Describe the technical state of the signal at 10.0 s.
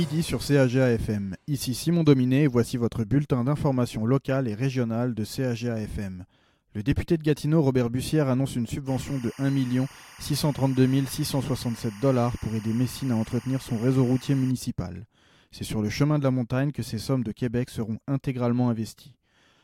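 A steady chirping warble sits faintly behind the sound at 10.0 s, well below it, perhaps 25 dB down. This is timecode bleed, running from 8.87 to 14.51 s: 24-frame linear timecode leaking from a neighbouring track or cable, its square wave flipping between tones near 1 and 2 kHz.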